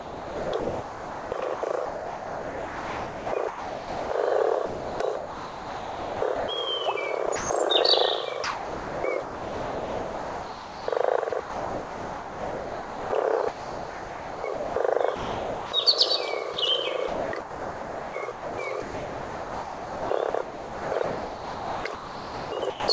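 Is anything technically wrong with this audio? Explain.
Yes, there are two related problems, both pointing to a voice detector on the sending end of a call.

The main one is sound chopped by the voice detector, in five stretches: 0.0 to 4.1 s, 4.66 to 6.48 s, 7.26 to 7.50 s, 8.44 to 15.72 s, and 17.08 to 22.88 s. The sender's detector is most likely flipping between transmitting and going quiet, so chunks of real sound get swapped for comfort noise. That's roughly 3.4 s, 1.5 s, 0.16 s, 5.7 s and 4.6 s lost across those spans. It comes out choppy.

There's also a single moment of sound dropped by the voice detector at 16.54 s, where a 20 ms sliver disappears. Here the detector apparently judged the sound to be background and stopped sending for an instant. The receiver filled the gap with comfort noise, so you get a tiny gap before the real sound picks up again. The call codec, which fits G.722, leaves nothing above 8 kHz.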